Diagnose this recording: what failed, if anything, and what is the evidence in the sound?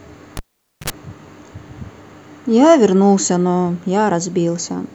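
A cable pulled and plugged in at the analogue wiring stage: a pop at 0.37 s, about 0.48 s of near silence, then 60 ms of 50 Hz mains buzz as the plug tip touches, and a second pop at 0.90 s. The buzz separates it from a digital dropout.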